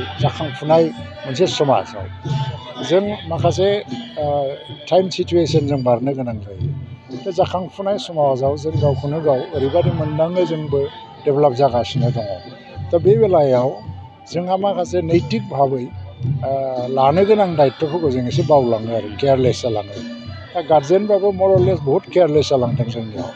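No faults can be heard anywhere in this recording.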